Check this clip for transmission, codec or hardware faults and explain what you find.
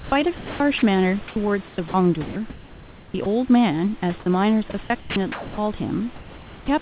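Three kinds of voice-detector fault affect the speech, all within the call path. That path's band-limited sound, with nothing above 4 kHz, fits G.711 mu-law at 64 kbps. Room noise sits about 24 dB below the speech.

Sound chopped by the voice detector, 0.0 to 3.26 s and 4.2 to 5.58 s. The sender's voice detector likely toggled between sending and muting several times. The receiver filled the gaps with comfort noise, about 1.42 s of the first stretch and 0.56 s of the second. Quiet syllables and word edges drop out, so the speech sounds choppy.

Comfort noise in place of the background, 6.16 to 6.68 s. During this pause the sender likely stopped transmitting, and the receiver generated noise roughly matching the background's spectrum for about 0.52 s. The level stays the same, about 22 dB below the loud parts. The real room texture gives way to a smooth, featureless hiss that lacks the detail of the surrounding background.

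Onset clipped by the voice detector, 6.64 to 6.68 s. When speech resumed, the detector was likely slow to react. The first 40 ms were not sent, and comfort noise played in their place. The returning sound therefore starts abruptly, without its soft lead-in.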